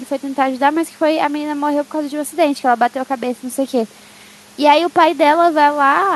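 No technical faults are audible anywhere in the recording.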